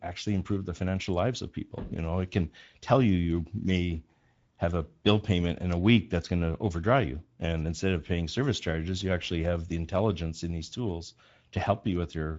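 Speex codec damage runs throughout this speech clip and is plainly audible. Its CELP coding, which fits roughly 16.8 kbps, models the excitation coarsely, and nothing remains above 7.7 kHz.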